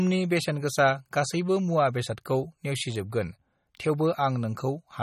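Throughout, the encoder runs short of bits, likely MP3 compression at a rate consistent with 32 kbps, leaving the speech watery and swirly with nothing above 16 kHz.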